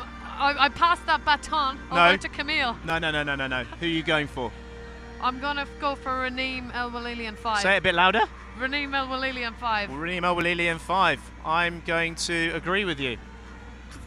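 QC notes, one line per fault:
2.90 s and 10.41 s, dropped buffer (overrun): the sound jumps ahead a few milliseconds without any silence, likely from missed samples; the waveform shows a step and the spectrogram a thin vertical line.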